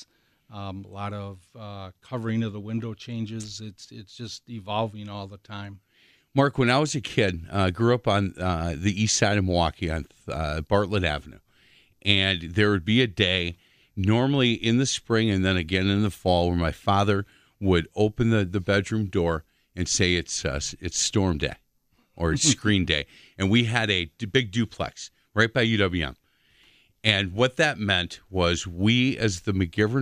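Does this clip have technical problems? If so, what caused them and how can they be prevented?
No, there are no technical problems to hear in this speech clip. With nothing at fault, there is no cause to trace and nothing to prevent.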